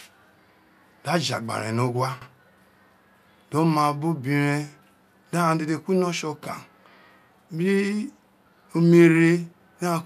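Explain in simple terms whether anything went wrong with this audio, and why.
Repeated frames at 2.21 s: a 72 ms stretch of the speech plays twice in a row, heard as a brief stutter. A short block of compressed audio was stored or sent twice, making the clip 72 ms longer.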